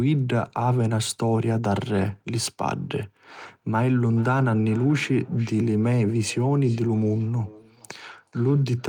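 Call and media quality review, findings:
Feedback echo between two devices from 3.87 s to the end: speech recurs about 0.4 s later, about 23 dB down, thinner and ringing. A second device replays the mic feed, which each canceller ignores.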